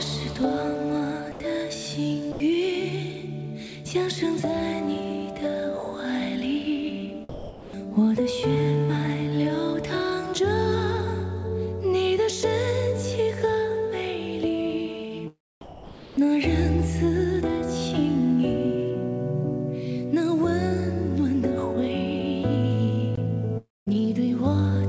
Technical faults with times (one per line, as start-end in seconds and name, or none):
1.32-1.40 sound dropped by the voice detector
2.32-2.40 sound dropped by the voice detector
7.29-7.73 sound dropped by the voice detector
15.61-16.17 sound dropped by the voice detector
23.57-23.94 long network dropout